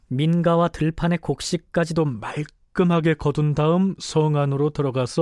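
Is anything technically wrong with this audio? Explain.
Yes. From 0.0 to 1.97 s there is a wrong sample rate fault. The samples are being played back faster than they were captured, with no rate conversion in between. The speed-up of 1.09 times fits material recorded at 22 kHz but played at 24 kHz. Because speed and pitch are tied together, the speech runs slightly hurried and sits about 1.5 semitones high for those first two seconds.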